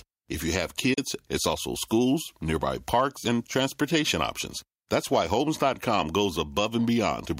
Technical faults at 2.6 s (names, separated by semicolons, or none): none